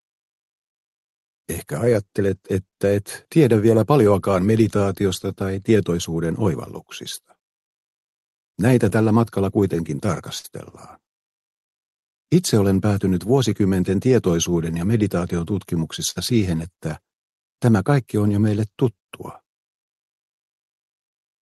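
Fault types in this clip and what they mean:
Clock drift between sender and receiver: The sending clock runs roughly 4% slow, so the receiver's jitter buffer keeps draining. Small timing hiccups recur unevenly through the whole clip. On a waveform they appear as slightly stretched or duplicated stretches, with no clean silences.
Repeated timing corrections: From 0.54 s to 21.07 s the receiver pads the audio to keep pace. Playback runs at about 98% speed and adds roughly 0.4 s overall. A spectrogram shows tiny repeated slices and faint discontinuities, all stretching, unevenly spaced.
Scattered short gaps: Brief losses were patched by continuing the last sound. There are about three in 0.70–2.75 s, seven in 6.66–11.71 s and five in 16.10–21.14 s, the longest around 50 ms. Each shows as a smeared, frozen-looking spectral patch or a small waveform tick.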